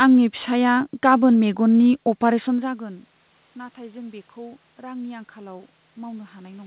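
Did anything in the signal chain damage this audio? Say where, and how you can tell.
Yes, in call processing. From 2.26 s to the end, voice and room noise swell together. This is automatic gain rising, slowly compensating for an input drop of about 22 dB.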